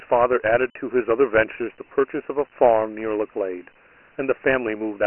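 From start to finish, the speech carries Dialogic VOX ADPCM damage. Nothing sounds above 3 kHz, which points to the 6,000-sample rate at 4 bits per sample. The telephone-style band from 300 Hz upward is cut short of its usual 3.6 kHz. The coarse 4-bit steps leave a gritty hiss that clings to every syllable and rides with the speech. A clean telephone band-limit or μ-law line would sound narrow but not granular like this.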